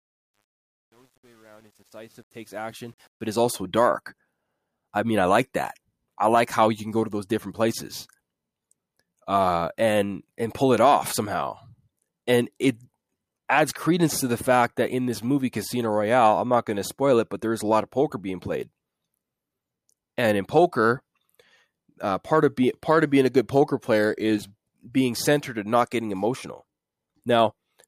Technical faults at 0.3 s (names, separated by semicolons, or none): truncation distortion on a fade